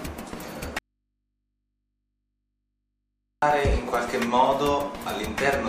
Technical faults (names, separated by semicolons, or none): audio dropout to a faint residue